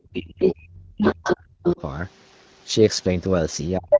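From the start to 1.66 s the talker's speech is repeatedly pushed down, by as much as about 40 dB, and parts drop out. This is speech suppressed in double talk, likely caused by an echo canceller that cannot separate the talker from the loudspeaker echo and ducks both. Unlike a simple level fade, the dips come and go with the second voice's activity.

During that stretch the other side's voice leaks through in short scraps at 0.45 to 0.51 s, 0.97 to 1.36 s and 1.65 to 1.81 s, roughly as loud as the talker. This is likely residual echo that the canceller failed to remove from the microphone. It is a distinct second voice layered on top, not a smeared repeat of the talker's own sound.

From 3.77 s to the end the talker is suppressed again, by up to about 35 dB. From 3.9 s the leaking voice returns, this time a little louder than the talker, so it briefly dominates the final moment.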